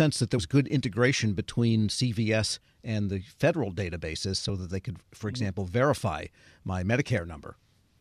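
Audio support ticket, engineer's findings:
Compressed frames skipped at 0.37 s in the speech. Symptom: the speech jumps forward, roughly 70 ms of material gone. The jump fits about three 23.2 ms frames. Probable component: decoder or container, with frames missing from the file or rejected as damaged. Distinguishing point: there is no silent gap, unlike a dropout.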